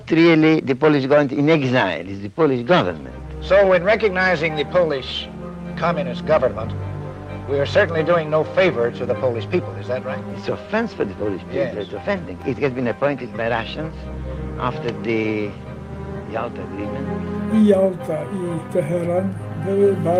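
No technical fault can be heard anywhere in the audio.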